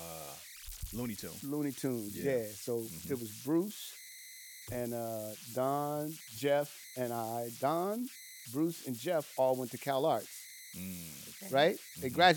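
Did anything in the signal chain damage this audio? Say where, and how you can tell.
Yes. The damage sits at the converter stage, and it runs through the whole recording. Whistles near 2 kHz appear in the pauses between phrases. Under the quieter speech the floor turns grainy. The error sits only about 15 dB below the signal. These are converter idle tones. A delta-sigma converter without dither falls into repeating bit patterns when its input is small. Those patterns become audible tones, and their pitch follows the input's offset.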